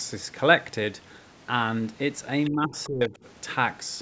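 At 2.45 to 2.49 s a brief scrap of a second voice comes through, other side's voice leaking through at roughly 20 dB below the talker. It is most likely loudspeaker playback that reached the microphone and that the echo canceller left in.

From 2.50 to 3.16 s the talker's speech is pushed down in pieces, by around 20 dB at its deepest and for about half a second in total. This is speech suppressed in double talk, likely the echo canceller attenuating everything while both sides overlapped.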